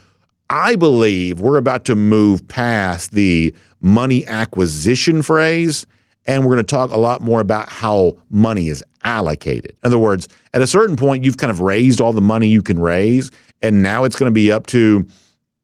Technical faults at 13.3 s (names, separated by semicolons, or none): none